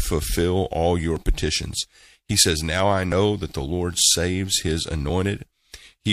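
It's a speech clip with one overlap between stream segments, right after "all your" at about 1.16 s. You hear a tiny skip where a sliver of audio, just under 20 ms, drops out and the waveform jumps. Two adjacent chunks of the stream claimed overlapping time stamps, so the player trimmed the overlap even though that audio wasn't actually duplicated. The timing fits a stream cut into 1-second segments.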